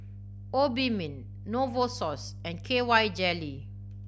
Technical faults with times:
0.00-4.08 mains hum

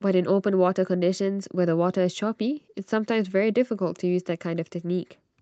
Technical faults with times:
none

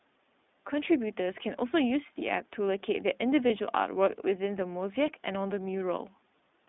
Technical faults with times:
0.00-6.69 iLBC codec
3.48-3.51 lost iLBC frames

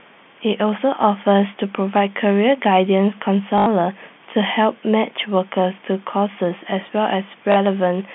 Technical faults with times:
3.58-3.66 packet loss with last packet repeated
7.52-7.56 packet loss with last packet repeated

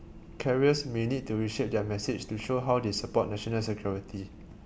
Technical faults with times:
none

